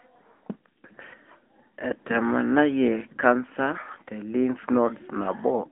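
The speech runs through an AMR narrowband mobile codec from start to finish. The band is held to roughly 250 Hz–3.4 kHz, with nothing above 3.5 kHz. The plainly audible buzzy, synthetic coloring of the vocal-tract model fits a mid-rate mode around 10 kbps.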